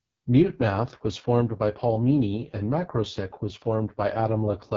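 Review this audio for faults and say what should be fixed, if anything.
The speech runs through an AMR wideband (HD Voice) codec with heavy damage for the whole clip. The rough, raspy quality fits the lowest AMR-WB mode, around 6.6 kbit/s. At that rate the pulse-driven vocal tract model has too few bits, and the band from 6.4 to 7 kHz is synthesised noise. On a spectrogram, the harmonics look smeared, with a flat noisy band near the top and nothing above 7.6 kHz. The waveform's fine structure looks coarse and buzzy. To prevent this, carry the call at 12.65 kbit/s or higher, or use a higher-quality codec.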